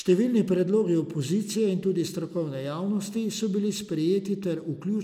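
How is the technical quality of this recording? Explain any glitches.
No technical faults turn up anywhere in this bit of speech, so there's nothing here that needs explaining.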